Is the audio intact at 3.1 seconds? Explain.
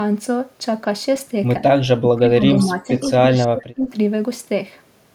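No. An echo leak runs from 3.03 to 3.09 s: a faint, delayed copy of the sound arrives about 107 ms late, roughly 30 dB below the main signal, most likely because the far end's echo canceller let loudspeaker pickup through. On a spectrogram it shows as a weak, smeared repeat of the preceding harmonics.

Right after, from 3.16 to 3.89 s, speech is suppressed in double talk. For a bit under half a second in total, the level dips by as much as about 25 dB, likely because the canceller could not separate this talker from the returning echo and turned both down. The waveform envelope shows sudden hollows, and the spectrogram thins or blanks in patches.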